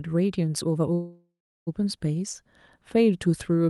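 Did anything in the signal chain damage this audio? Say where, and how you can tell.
Yes, at the network and jitter buffer stage. A call audio freeze runs from 0.93 to 1.69 s. The speech stops moving and the last sound carries on as a fading buzz or hiss. It decays into about 0.37 s of silence. Then the speech resumes exactly where it left off, with nothing skipped. Everything after is pushed about 0.73 s later. The likely cause is delayed packets draining the jitter buffer, with the receiver stretching out the last sound until they arrived.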